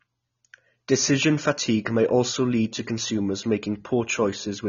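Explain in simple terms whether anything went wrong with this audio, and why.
The speech was most likely squeezed hard by AAC compression, which throws away detail it expects listeners won't miss. Across the whole clip, everything above about 6.9 kHz is gone, so the voice sounds dull and muffled, with a watery, fizzy edge on hissing sounds.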